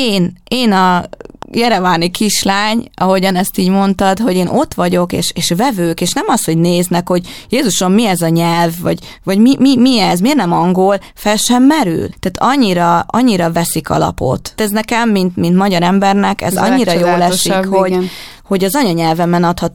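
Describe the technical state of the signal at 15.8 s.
At 15.8 s the speech signal is intact, with no audible technical fault at that moment.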